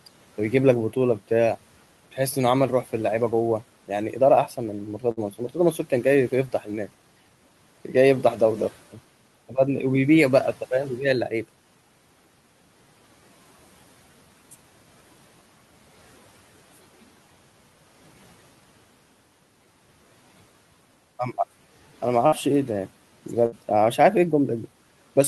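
At 5.11 s there's a burst of packet loss. The receiver stretches the last bit of sound for around 50 ms, so it comes out as a brief buzz or hiss that fades, and then the speech picks up about 60 ms further along, skipping what came in between.

Right after, from 5.31 to 5.55 s and again from 6.31 to 6.68 s, the speech gets cut by the noise suppressor. It treats soft parts as noise and pulls them down with the room noise, which sits about 25 dB under the speech. The dips reach about 9 and 10 dB and affect roughly a tenth of a second each time, so those bits sound swallowed.

The same packet loss comes back at 22.27 s and 23.46 s. Each time there's another fading fill of 50 to 60 ms, and about 60 ms of the speech is missing.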